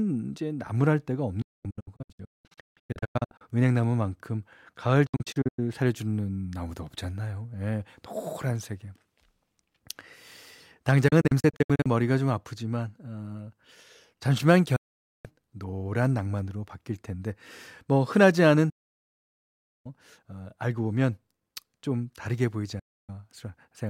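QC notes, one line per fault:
1.42–3.42 s, 5.06–5.59 s, 11.08–11.86 s, 14.76–15.26 s, 18.70–19.86 s, 22.79–23.10 s: digital broadcast dropout. The receiver mutes with 8 ms fades on lost frames, leaving holes of up to about 1.15 s, some broken into several short gaps. The missing sound is gone, not delayed.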